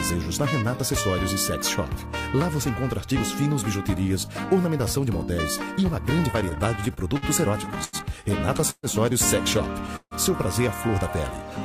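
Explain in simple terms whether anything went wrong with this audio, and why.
From 6.31 to 7.25 s the sound catches and drags in eight small hiccups, the longest about 50 ms, adding roughly 0.15 s in all. These are repeated stalls (stutter): pieces of the audio kept reaching the receiver late, so its small waiting store ran dry again and again. Each time it held the last bit of sound until more arrived, so nothing is lost, but the flow stumbles.

At 7.84 s one sound is held too long for about 90 ms before the audio carries on. This is a short stall from a late packet. A single piece of the audio wasn't there when it was due, so the receiver stretched what it had until that piece arrived, then continued from the same spot. Nothing is skipped. The moment simply lasts longer than it should.

At 8.70 s and again at 9.96 s the audio briefly freezes into a fading buzz or hiss that dies away to about 40 ms and 50 ms of silence. 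The pauses last about 0.13 s and 0.15 s, and then the sound picks up exactly where it stopped. These are call audio freezes, likely caused by audio held up on its way, which left the receiver with nothing to play. It filled the wait and then went on, so a gap was inserted but nothing is missing.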